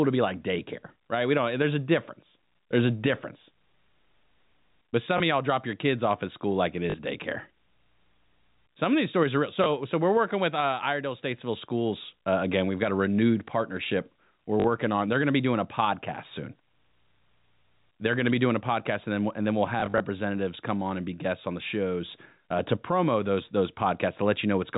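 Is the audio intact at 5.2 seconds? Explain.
No. Around 5.18 to 5.20 s there is a small blip. This is packet loss with the last packet repeated: one 20 ms stretch went missing, and the receiver filled the gap by replaying the previous piece.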